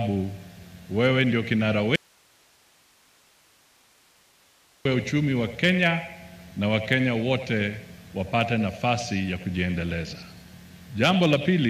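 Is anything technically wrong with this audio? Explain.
Yes. From 1.96 s to 4.85 s there is an audio dropout to a faint residue. For about 2.9 s the signal is gone, leaving only hiss some 35 dB down, likely because the source was lost while the path stayed live. The waveform collapses abruptly to a thin band, and the spectrogram shows a sharp-edged block of faint broadband noise.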